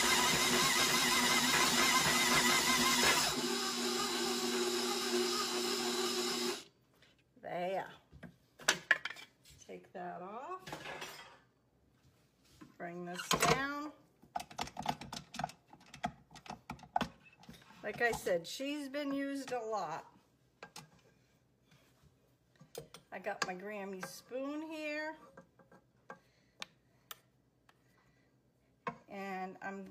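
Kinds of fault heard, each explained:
Nothing here calls for a listing, since no technical fault turns up anywhere in the audio.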